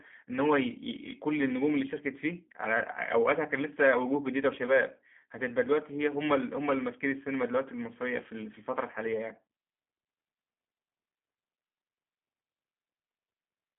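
Throughout, the speech carries G.729 codec damage: the line band runs about 200 Hz to 3.4 kHz, with nothing above 3.5 kHz, and the voice has a plainly rough, synthetic grain. A plain telephone filter would only muffle the sound, but here it is rebuilt from a vocal tract model and sparse pulses, which fits an 8 kbit/s G.729A stream.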